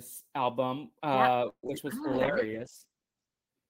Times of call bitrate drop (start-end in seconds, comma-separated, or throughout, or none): 2.12-3.56